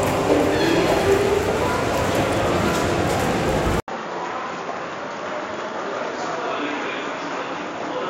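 At 3.8 s the everyday sound cuts out for 80 ms and returns about 10 dB quieter, duller and boxier, with a new low hiss well beneath it, likely an input switched to a poorer device. The spectrogram shows everything above 7 kHz gone from there on, and the waveform drops in height.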